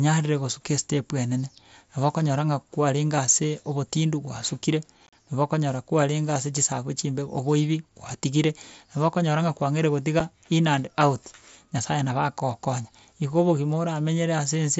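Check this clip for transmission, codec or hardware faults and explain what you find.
Two dropouts are caused by unconcealed Bluetooth headset packet loss on an mSBC wideband link. At 5.07 to 5.13 s, about 52 ms of speech vanishes in short gaps, the longest 37.5 ms. At 10.2 s a single 7.5 ms hole appears. Lost headset packets were replaced with silence or an idle pattern rather than concealed, so each gap has abrupt edges.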